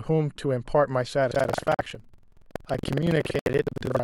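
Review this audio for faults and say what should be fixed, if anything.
From 1.3 s to the end, the application writing the playback ring buffer and the hardware reading it have fallen out of step, so their positions cross inside every period. This is buffer tearing. Most of each buffer replays speech from about a fifth of a second earlier, with hard splices at both edges, producing a steady robotic rattle at 21.5 Hz, which fits a 2048-sample buffer. It persists while speech is present. To prevent it, keep the write pointer a safe margin ahead of the read pointer, and resynchronise or reset the stream whenever an underrun or overrun is detected.

At 1.74 to 1.80 s and again at 3.39 to 3.48 s, damaged bits in the compressed stream caused the decoder to reject some frames, and the player filled those slots with silence. This is a corrupt frame muted. Each gap cuts in abruptly and spans what sounds like a few frame lengths, 60 ms and 84 ms respectively, while the timing of the surrounding speech stays intact. 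To prevent it, protect the stream with error detection and retransmission or forward error correction, and use packet-loss concealment in place of hard muting.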